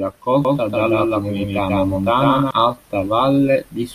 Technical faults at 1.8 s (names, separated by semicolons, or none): doubled audio track